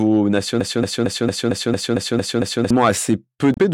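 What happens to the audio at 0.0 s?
At 0.0 s the audio is intact, with no dropout, click or other fault at that moment.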